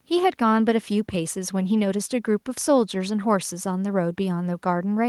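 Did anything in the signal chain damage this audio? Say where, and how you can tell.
No, nothing in the signal chain audibly damaged this speech recording. No stage from capture to playback leaves a mark that can be heard or timed.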